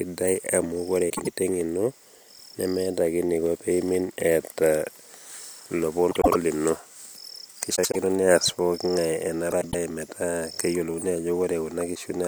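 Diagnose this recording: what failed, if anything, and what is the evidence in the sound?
Short garbled flutters break the speech at 1.09–1.27, 6.11–6.35, 7.75–7.96 and 9.51–9.75 s. These are frames out of order in the network path: adjacent blocks of 78 or 105 ms, fitting three- or four-frame runs, were swapped, losing no time.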